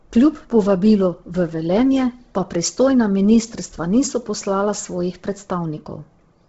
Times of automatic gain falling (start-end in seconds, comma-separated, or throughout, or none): none